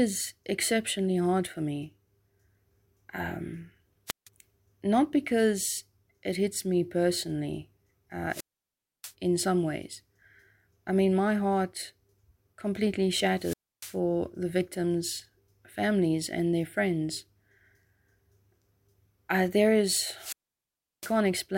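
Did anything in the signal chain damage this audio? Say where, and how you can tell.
Yes. Wireless microphone squelch dropouts in the radio link hit at 4.07–4.29 s (before "not because it hits"), 8.29–9.14 s (before "in some ways"), 13.35–13.98 s (before "the victims' families and") and 20.15–21.18 s. Each time, rising hiss precedes a muted hole of 0.16, 0.64, 0.29 and 0.71 s, as the fading signal trips the receiver's squelch. That hiss build-up rules out network packet loss.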